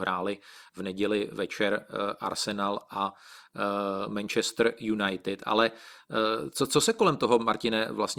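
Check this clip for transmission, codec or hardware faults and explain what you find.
Nothing turned up when I checked the clip, so there are no faults to explain.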